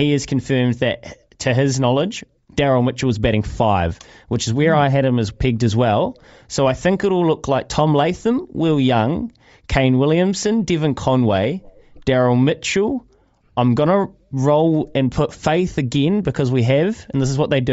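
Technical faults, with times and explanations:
Throughout, Bluetooth LC3 compression: the speech has a plainly audible breathy, grainy edge, and its upper spectrum is thinned out and replaced by a hiss-like wash rather than real detail. This comes from a low-rate transform codec that drops high bands and fills them with noise, likely LC3 at around 32 kbps with 10 ms frames. A plain low-pass filter would only dull the top end, but here that range sounds noisy.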